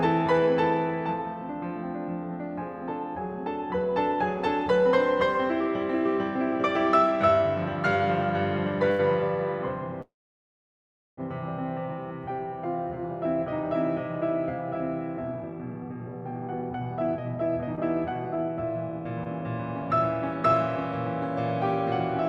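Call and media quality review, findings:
Short stall from a late packet, 8.91–9.02 s. Packet arrived late, jitter buffer ran dry, receiver stretched the last sound by about 81 ms, then resumed at the same point. The music is held briefly with a slight buzz or dip. Nothing lost.

Call audio freeze, 10.02–11.20 s. Likely a longer network hold-up emptying the jitter buffer. The music stops, the continued sound fades out, then about 1.08 s of silence follows. Playback resumes where it stopped, a gap of about 1.16 s inserted, nothing lost.

Jitter buffer speed-up, 15.18–20.52 s. Buffer over target after the earlier delays. Receiver repeatedly cut pitch-period slices, roughly 0.7 s in total. The music runs at 114% speed with pitch unchanged, sounds hurried, and the tempo is uneven.

Short concealed packet loss, 17.75–17.80 s and 19.24–19.28 s, inside the speed-up. About 60 ms missing each time, bridged with 18 ms of continued sound and blended back in. 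Each is heard as a brief smear or wobble in the music.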